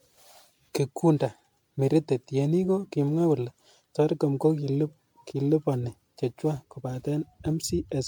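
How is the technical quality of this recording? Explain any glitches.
The technical quality is degraded by generation loss across the whole recording. The speech sounds swirly, smeared and hollow, and consonant attacks are blurred. This likely comes from roughly ten rounds of MP3 decoding and re-encoding at a rate fitting 96 kbit/s. Each pass quantises on a shifted frame grid, so noise and spectral gaps accumulate beyond what that bitrate alone would produce.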